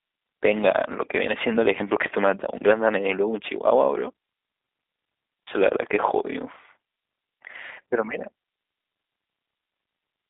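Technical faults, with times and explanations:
Throughout, G.729 codec: the speech has a slightly rough, synthetic quality because each 10 ms frame is rebuilt from a vocal tract filter, a pitch predictor and a few coded pulses rather than the original waveform. The damage is plainly audible. The band is limited to roughly 300 Hz to 3.7 kHz, and nothing passes above about 3.8 kHz, which fits the 8 kbit/s G.729A telephony codec.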